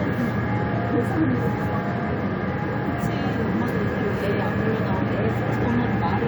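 Nothing faulty is audible here.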